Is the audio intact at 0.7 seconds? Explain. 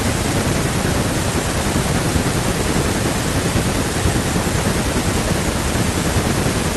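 Yes, the speech at 0.7 s is intact, with nothing at that moment beyond what a normal call codec path leaves in the sound.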